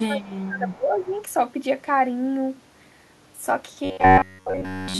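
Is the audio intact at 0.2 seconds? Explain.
No. From 0.06 to 1.15 s, the echo canceller likely confused near-end speech with loudspeaker echo during double talk. This is speech suppressed in double talk, and the level dips by up to about 20 dB.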